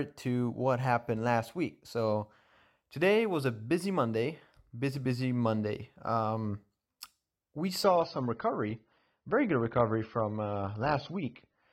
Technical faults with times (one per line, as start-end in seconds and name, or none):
7.84-11.73 adaptive stream at a lower bitrate